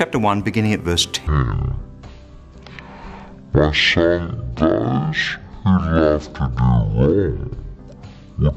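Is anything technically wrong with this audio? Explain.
Yes. Stereo read as mono, from 1.27 s to the end: the interleaved left and right samples are read in sequence as one channel, so the audio plays at half speed and an octave low, with a fainter mirrored image appearing in the upper half of the spectrum.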